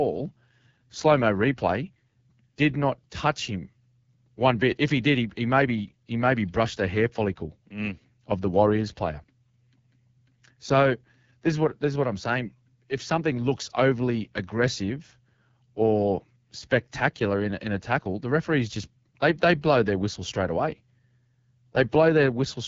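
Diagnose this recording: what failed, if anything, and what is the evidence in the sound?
Codec stage: AMR wideband (HD Voice) throughout. Raspy, rough speech with nothing above 7.5 kHz fits a low rate near 8.85 kbit/s, not mere filtering.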